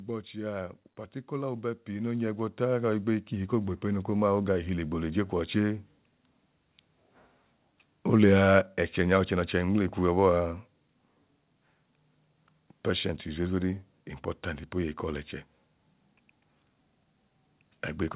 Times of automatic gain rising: 1.28-5.60

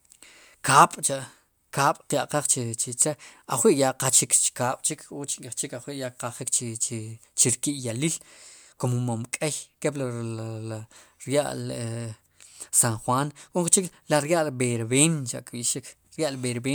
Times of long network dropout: none

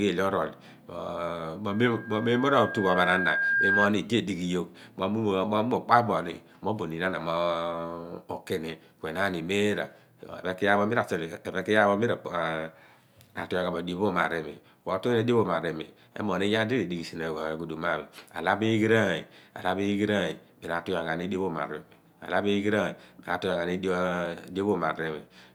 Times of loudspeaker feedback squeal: 1.71-3.91

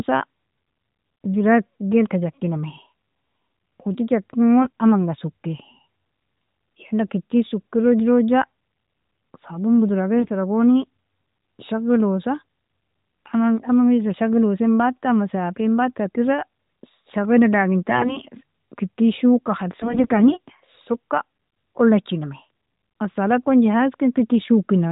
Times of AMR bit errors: 4.62-4.70, 10.14-10.30, 17.88-18.18, 19.80-20.39

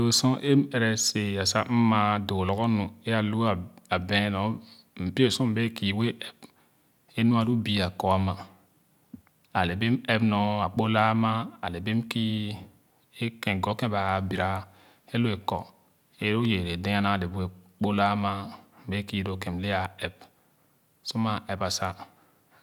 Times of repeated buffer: none

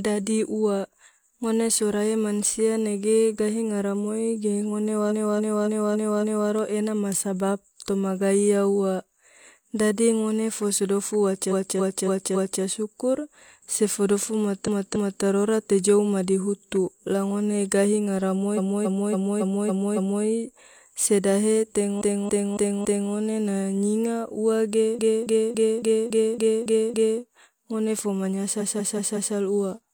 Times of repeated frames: 5.07-6.46, 11.47-12.59, 14.63-15.19, 18.53-20.20, 21.97-23.08, 24.94-27.17, 28.56-29.31

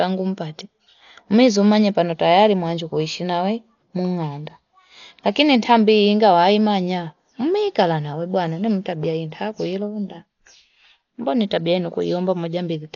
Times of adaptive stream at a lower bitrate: none

